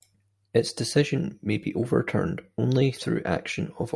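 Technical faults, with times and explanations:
No technical faults can be heard in this speech.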